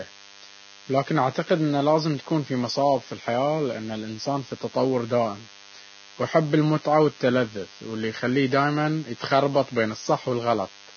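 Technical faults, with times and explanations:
Throughout: DECT cordless phone buzz. A thin, steady buzz at 100 Hz with a dense stack of harmonics sits about 25 dB below the speech. A nearby DECT handset or base sends a radio burst every 10 ms, and the audio circuit rectifies those bursts into sound.
Throughout: Vorbis compression, heavy damage. Nothing is left above 6.6 kHz, and the remaining treble is hissy and grainy, with roughened tones and smeared consonant onsets. The likely cause is Vorbis coding at a very low bitrate, around 18 kbps, where fine detail is quantised into noise.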